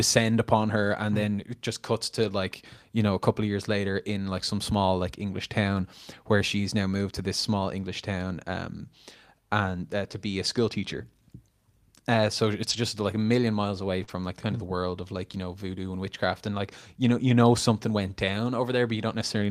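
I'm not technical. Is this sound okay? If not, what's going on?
No. The speech has several brief glitches where bits of the call went missing on the way.

Five times, lost packets were rebuilt from error correction: at 2.23 to 2.29 s (after "then it just cuts"), at 10.11 s, at 12.69 to 12.75 s (after "uh so"), at 14.08 to 14.10 s (after "a million miles away"), and at 18.28 to 18.30 s. Each lost piece arrived as a rough spare copy in the next piece, so nothing drops out. The sound just turns grainy for a few hundredths of a second.

The short concealed packet loss at 14.03 to 14.10 s is different. About 40 ms of audio never arrived, so the receiver guessed by stretching the sound just before it. That comes across as a quick smear or wobble rather than graininess, and any short consonant there may vanish. It runs straight into the rebuilt piece at 14.08 s.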